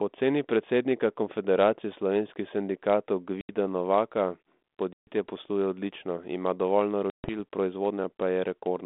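Packet loss on an ADPCM call at 3.41–3.54 s (80 ms lost), 4.93–5.09 s and 7.10–7.36 s (140 ms each) cuts hard-edged silent gaps into the narrowband G.726 speech. On a spectrogram these gaps appear as blank vertical bands, and the waveform drops abruptly to flat. Each time the speech returns, the decoder's predictor and step size are out of step with the sender's, so the speech resumes slightly distorted and settles within tens of milliseconds.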